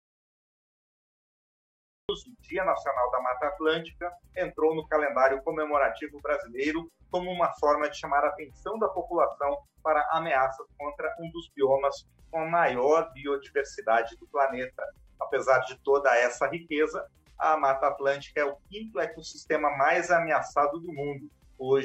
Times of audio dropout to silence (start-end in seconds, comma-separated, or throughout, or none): 0.00-2.09